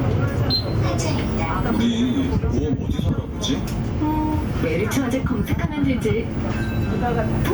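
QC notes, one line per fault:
Throughout: gain pumping. Quiet parts swell up in the gaps and drop by roughly 10 dB under each loud sound, so the level breathes with the material and loud and soft moments sit unnaturally close together. This is likely a fast limiter or compressor clamping down on a signal driven with far too much input gain. The waveform looks flattened, with peaks of even height, and the spectrogram shows quiet content brightening between events and dimming under them.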